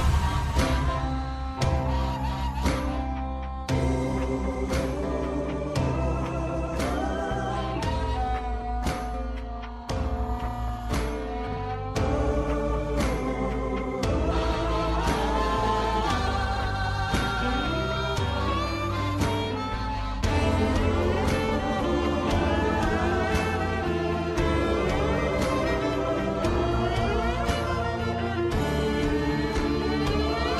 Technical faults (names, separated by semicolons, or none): frames out of order